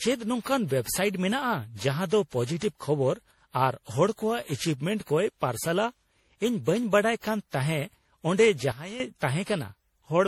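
From the start, the speech sounds swirly, smeared and hollow, and attacks blur. This is generation loss, likely from about ten rounds of lossy re-encoding, in a way that fits MP3 at 64 kbit/s. Each pass requantised on a shifted frame grid, stacking noise and spectral holes.

At 8.72 s the level drops by about 12 dB in a single step. Speech and background noise fall together. This is a sudden gain jump. A digital gain change was likely applied with no ramp. It lasts until 9.0 s.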